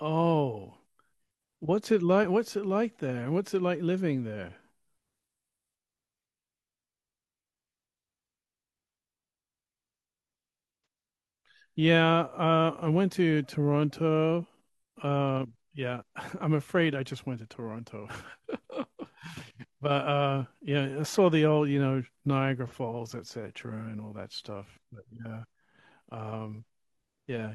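AAC frame loss with concealment hits twice. At 10.77 to 10.86 s, about 85 ms of data goes missing, which fits two lost frames, and at 22.67 to 22.74 s a 43 ms gap fits one. The decoder patches each from the last good spectrum, leaving a brief smeared, noisy patch in the speech.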